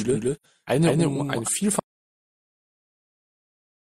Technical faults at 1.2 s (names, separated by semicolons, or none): doubled audio track